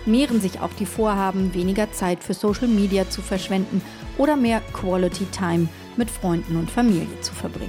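Nothing here goes wrong at any point; the audio just runs along without a single glitch worth pointing out.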